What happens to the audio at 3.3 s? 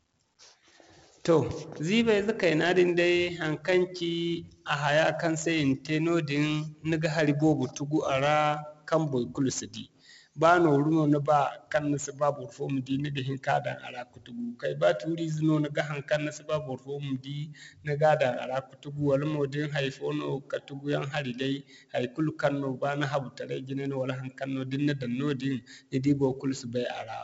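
At 3.3 s the speech carries 4-bit ADPCM compression, which runs through the whole clip rather than starting there. Each sample is coded as a small step from a predicted value, and the step size adapts as the level changes. The coding error rides on the signal as a gritty hiss that swells on louder syllables. Sharp onsets distort where the step cannot grow fast enough. The damage is heavy. Nothing sounds above about 7.7 kHz, so the sound is dull. That fits a rate of about 64 kbps at a 16 kHz sample rate.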